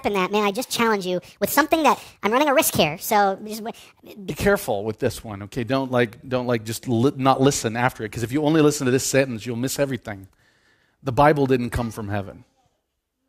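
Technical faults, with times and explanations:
0.00–4.30 s, wrong sample rate: the speech runs 1.5 times too fast and sits about 7 semitones high, sounding hurried and chipmunk-like until normal playback returns just before "careful with this one". The 1.5 ratio fits 32 kHz audio played at 48 kHz with no conversion. Speed and pitch rise together by that same ratio, and the vocal formants shift up with them. A pitch shifter or time-stretcher would change only one of these.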